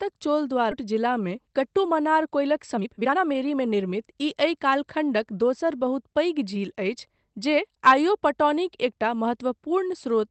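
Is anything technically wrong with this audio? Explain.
Yes, there are three timing faults of two kinds.

At 0.71 to 0.73 s there is a skip ahead. With later audio already waiting, roughly a second of sound was discarded, and playback jumps straight to it with no filler. Unlike a dropout, no silence or smeared concealment is heard, just an abrupt splice.

From 1.27 to 1.84 s there is a jitter buffer speed-up at 107%, and from 2.28 to 4.68 s a stronger one at 122%. An overfilled buffer trimmed repeated pitch-period slices, about 50 ms and then about half a second in total. The sound is hurried, most clearly in the second stretch, but the pitch stays put, which separates this from resampling errors that raise pitch along with speed.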